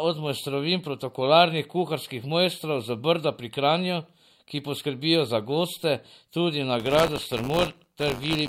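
Speech, with buffer tearing from 6.79 s, just after "za goste tudi na", through to the end. The writer and the hardware reader of the ring buffer have slipped, so a small slice of each period replays audio from roughly 20 ms earlier, hard-joined on both sides. That gives a robotic 100 Hz buzz, which points to a 10 ms period, heard only while sound is present. A spectrogram shows thin vertical striations every 10 ms, and the waveform shows matching small steps.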